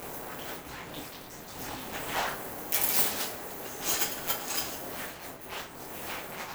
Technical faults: buffer tearing

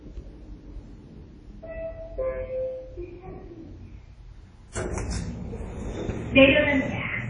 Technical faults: WMA compression

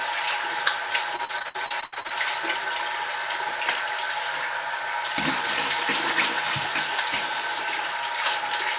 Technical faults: repeated packet loss (robotic sound)

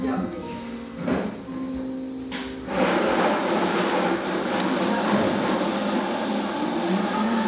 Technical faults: none

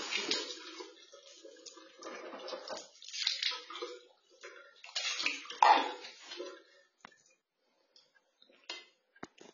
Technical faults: AAC compression

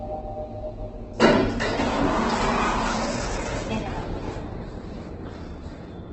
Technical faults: Opus compression

